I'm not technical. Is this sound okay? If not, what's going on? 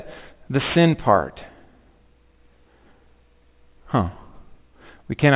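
No. Aliasing runs through the whole clip, from start to finish. The audio seems to have been converted to a much lower quality setting without first removing the high sounds it could no longer hold. Anything above about 4 kHz got folded back down into false, unrelated tones. That's why the speech's s and sh sounds come across gritty and metallic, with a faint harsh layer, quieter than the voice, riding along underneath.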